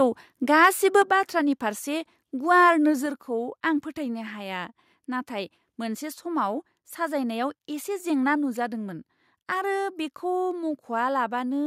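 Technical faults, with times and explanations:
0.63–0.67 s, microphone overload: The loudest peaks push about 1 dB past the converter's limit, and a small share of samples are flattened at the top. That adds a brief, harsh crackle. The likely cause is microphone input gain set too high for the converter.
1.02 s and 3.06 s, microphone volume stepped down: The level falls abruptly, by about 4 dB and then about 3 dB. The voice and the background drop together. This is likely the call software cutting the device's input volume after finding the microphone too loud or clipping.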